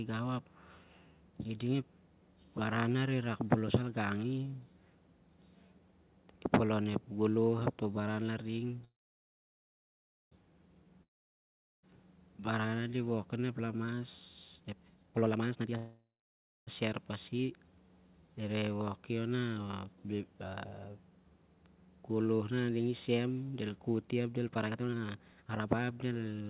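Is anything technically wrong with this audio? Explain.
Yes. This speech clip, carried over a call path whose narrowband coding leaves nothing above 4 kHz, has two call audio freezes, a long network dropout and two jitter buffer speed-ups.

A call audio freeze runs from 8.85 to 10.33 s and another from 15.77 to 16.69 s. These gaps were likely caused by packets being held up until the jitter buffer emptied. In each, the last sound fades into a short buzz and then silence, about 1.4 s of it in the first and about 0.6 s in the second. The speech then resumes where it stopped, nothing lost, just delayed. A spectrogram shows a brief smeared tail, then a blank band.

A long network dropout runs from 11.03 to 11.85 s, likely from audio that never arrived. A fading buzz gives way to near-silence, and about 0.8 s of speech is gone, so the waveform jumps ahead when it returns.

A jitter buffer speed-up runs from 14.56 to 15.76 s at about 189% speed, and another follows "del koti ap del" from 24.50 to 26.48 s at about 155%. 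In each, roughly a second of pitch-period slices was cut to shed backlog, so the speech sounds hurried while the pitch holds. A spectrogram shows compressed syllables with unchanged harmonic spacing.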